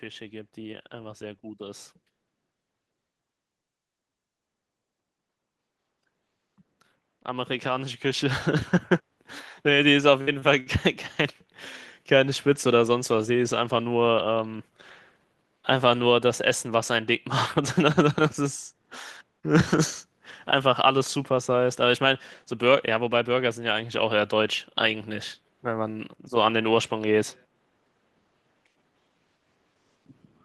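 From 0.05 to 1.9 s and again from 6.43 to 10.06 s, automatic gain rising lifts speech and background together by about 6 dB and then about 7 dB, seen as a widening waveform envelope.

At 10.21 to 10.30 s, a burst of packet loss leaves 56 ms of concealment, the last sound held and fading out as smeared horizontal bands on a spectrogram, and 60 ms of speech is skipped.

Short stalls from late packets follow at 10.39 to 10.45 s (30 ms) and 10.60 to 10.69 s (62 ms). The jitter buffer empties and the last sound is stretched, showing as briefly frozen spectral bands, with nothing lost.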